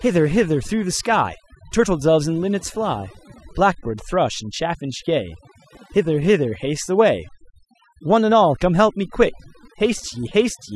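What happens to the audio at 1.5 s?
Overdone noise removal is at work at 1.5 s, as it is across the whole clip. Frequency bands near the noise floor are cut away, leaving near-silent gaps with twinkling specks. Unlike plain low-pass filtering, the damage comes and goes with level rather than removing a fixed top band.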